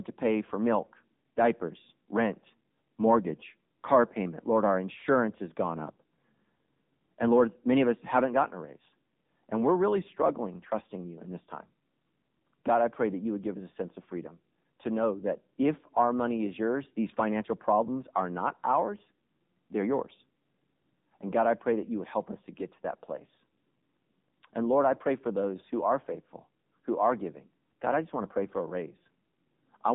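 From start to finish the speech carries AMR narrowband mobile codec damage: nothing above 3.8 kHz survives, the line band sits at 200 Hz to 3.7 kHz, and a buzzy, synthetic edge fitting a low mode near 8 kbit/s separates it from simple band-limiting.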